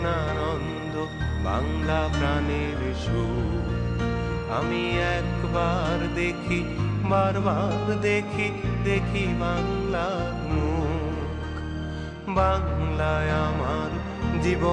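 No technical faults are audible.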